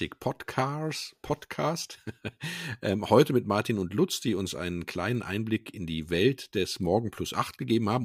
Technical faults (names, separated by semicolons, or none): none